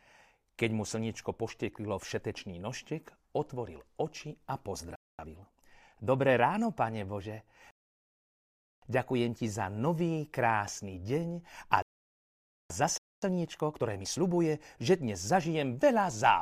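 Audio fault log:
4.96–5.19 s and 12.98–13.22 s, playback stall: the speech cuts out mid-flow for about 0.23 s and then 0.25 s before carrying on. Each gap is most likely the player's output thread being blocked or briefly starved of data, leaving the output silent until it recovered.
5.19–6.73 s and 13.22–14.20 s, time-compressed catch-up: right after each stall the speech is hurried, at 1.15× and then 1.25×, with unchanged pitch. The player is clearing its backlog by cutting out small pieces and cross-fading the joins.
7.71–8.82 s and 11.82–12.70 s, rebuffering stall: the sound drops to silence for about 1.12 s and then 0.88 s, then resumes exactly where it stopped. The player ran out of downloaded audio and waited for more, so nothing is lost but time is added.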